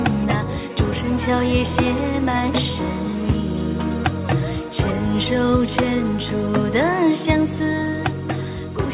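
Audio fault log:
The signal has no faults, and its content stops at 4 kHz, which fits a telephone-band call path such as G.711 mu-law at 64 kbps.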